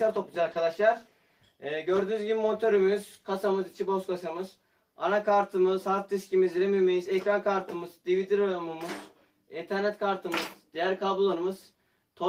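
Three brief dropouts fall early in the clip, at 0.43 to 0.47 s, 0.53 to 0.57 s and 1.09 to 1.13 s, each showing short concealed packet loss. In each case about 20 ms of audio failed to arrive in time, and the decoder covered the gap with 20 ms of synthesised continuation, extending the preceding sound before crossfading back into the received stream. The result is a short smear or wobble at each point.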